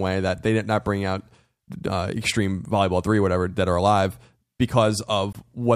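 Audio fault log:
5.33–5.35 s, Bluetooth stall: the speech drops to silence for about 21 ms and then carries on from where it stopped. A gap this short and clean sounds like a brief hiccup in playback rather than a level dip or distortion. The likely cause is radio interference delaying packets on the wireless link long enough for the headphones' small playback buffer to empty, so output halted until the retransmitted audio arrived and refilled it.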